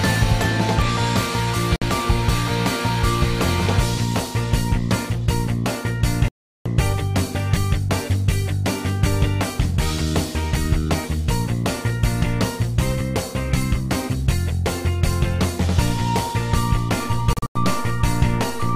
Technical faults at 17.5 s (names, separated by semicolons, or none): Bluetooth dropout